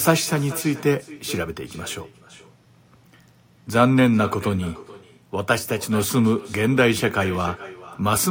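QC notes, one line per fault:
Throughout, echo with no canceller: the far end's loudspeaker bleeds into its mic, so every phrase returns roughly 0.4 s later, about 18 dB down, and thin.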